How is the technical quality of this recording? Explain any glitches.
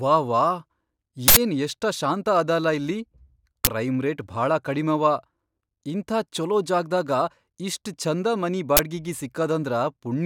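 The speech is interrupted three times by harsh bursts of loud digital noise: at 1.28 to 1.37 s (about 85 ms), 3.65 to 3.67 s and 8.77 to 8.79 s (about 21 ms each). This is an uninitialised buffer fault. Blocks were sent to playback before any audio was written into them, so whatever data was left in memory came out as samples. The burst lengths suggest 4096- and 1024-sample blocks.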